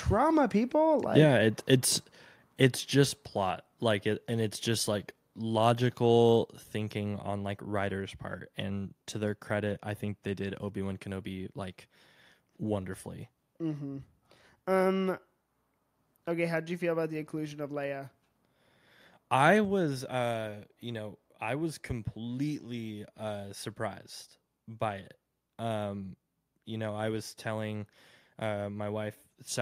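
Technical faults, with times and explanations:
3.51 s and 6.63 s, microphone volume stepped down: at each of these points the whole recording, speech and room sound together, suddenly drops by about 3 dB, so the level goes down in two separate steps rather than sliding gradually. That pattern is most likely the call software lowering the microphone's input volume in single jumps, probably because it judged the input too hot. Everything after each step simply sits quieter than before.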